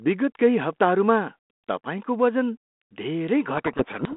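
From 3.56 s to the end of the clip, the speech suffers a codec payload misread: the G.726 code words are being unpacked with their bit order reversed, so the decoder applies the wrong adaptive step. The speech sinks under harsh, grinding distortion. Before that point the telephone path sounds like 32 kbit/s G.726, band-limited to roughly 200 Hz to 3.5 kHz with light coding roughness.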